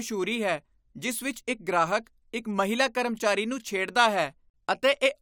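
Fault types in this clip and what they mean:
No fault types are present in this clip.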